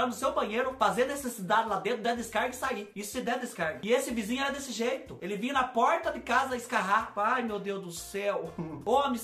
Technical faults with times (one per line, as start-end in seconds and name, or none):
2.65 dropped samples